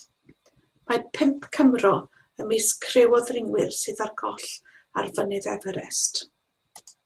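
Speech with three spots where packets were lost in transit and each was rebuilt from the low-bitrate backup copy carried in the following packet, as with Opus in-band error correction. Because the decoder played those copies, there are no gaps. Instead the sound turns briefly rougher and noisier at 1.37–1.43 s and 3.07–3.13 s, about 40 ms rebuilt each (consistent with two lost packets), and at 4.27–4.37 s, about 60 ms rebuilt (consistent with three).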